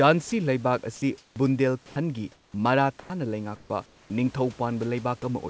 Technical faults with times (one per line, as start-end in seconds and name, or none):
0.30-0.32 sound dropped by the voice detector
0.96-1.36 sound dropped by the voice detector
1.86-1.96 sound dropped by the voice detector
2.32-2.54 comfort noise in place of the background
3.00-3.10 sound dropped by the voice detector
3.56-4.10 comfort noise in place of the background